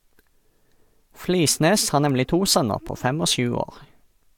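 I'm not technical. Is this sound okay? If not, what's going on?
No. There are two sharp ticks in the speech, at about 2.10 s and 2.89 s. Each is a bit error spike: one digit in the stored audio flipped, so two or three samples jumped suddenly in value and then snapped straight back.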